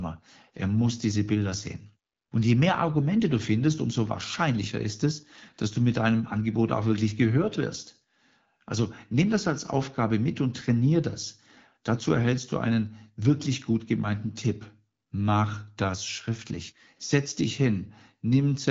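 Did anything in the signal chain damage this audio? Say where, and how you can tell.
No, nothing in this speech stood out on listening as damage from any stage of the signal chain.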